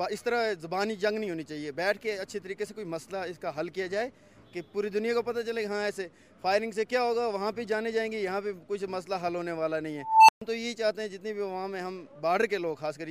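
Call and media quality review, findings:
Unstable filter, 9.99–10.42 s. Recursive filter stage running with bad coefficients, feedback growing without bound. Tone near 1 kHz swells over 0.29 s to clipping, then numeric overflow mutes output. Heard as a rising squeal cut to 0.13 s of silence until the filter resets.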